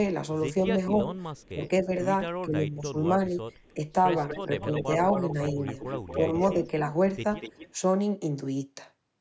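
From 0.76 to 1.9 s the speech dips, at worst by roughly 15 dB, and again from 2.45 to 3.8 s by about 10 dB. Brief, shallower dips follow at 4.46 to 4.88 s and 5.53 to 5.58 s. This is speech suppressed in double talk. An echo canceller likely pulled the talker down while the other side was speaking too.

A fainter, delayed copy of the speech trails behind it at 0.93 to 1.49 s and, about 35 dB below the speech, at 3.53 to 3.74 s. It is most prominent from 4.28 to 6.67 s, about 10 dB below the speech, and returns at 7.41 to 7.73 s. This is echo leak, likely loudspeaker sound the canceller failed to remove. It comes back 258 ms late at first, then 241 ms.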